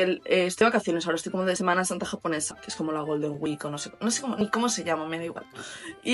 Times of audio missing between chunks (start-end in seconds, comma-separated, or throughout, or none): 0.61, 1.56, 2.51, 3.46, 4.41, 5.36